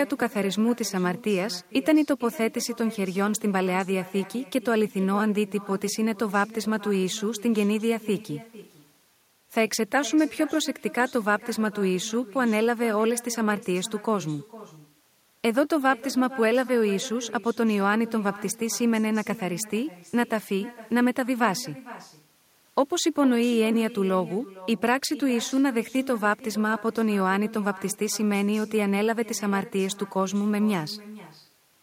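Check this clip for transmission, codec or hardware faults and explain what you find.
One fault runs through the whole clip. Echo with no canceller, present from start to finish: the far end plays this speech over a loudspeaker, its microphone picks it up, and nothing removes it, so each phrase returns about half a second later, about 18 dB quieter and thin.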